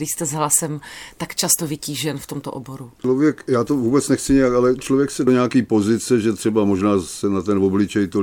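At 0.0 s, just before "jste s hlasem tak", and again at 3.04 s, between "vytížen v tomto oboru" and "já to vůbec nechci", damaged data in the compressed stream makes the decoder misread frames and resync, giving a brief glitch in the speech.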